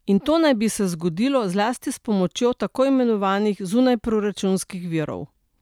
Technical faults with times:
none

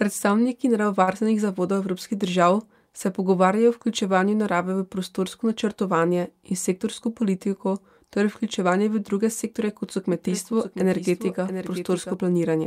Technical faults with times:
1.03-1.09 short stall from a late packet
6.36-7.37 jitter buffer speed-up
10.12-12.14 doubled audio track

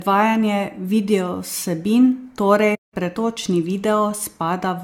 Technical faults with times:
0.00-4.84 generation loss
2.74-2.94 playback stall

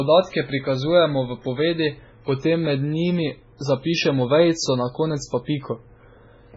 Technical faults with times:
0.00-6.56 MP3 compression

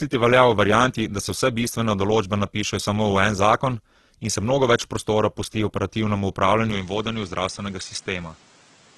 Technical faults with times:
0.00-8.98 Opus compression
6.71-8.98 input switched to a poorer device

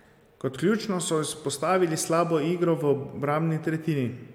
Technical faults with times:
none

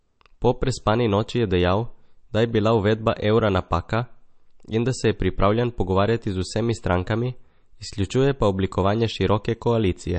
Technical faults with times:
0.00-10.19 MP3 compression

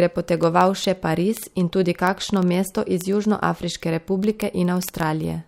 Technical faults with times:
0.14-5.47 word clock ticks

